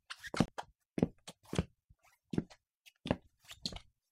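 At 0.46 s the sound drops to silence for about 25 ms, resuming at 0.48 s. A Bluetooth stall is the likely cause: delayed packets emptied the headphones' buffer. The waveform shows a flat gap, the spectrogram a thin blank vertical strip.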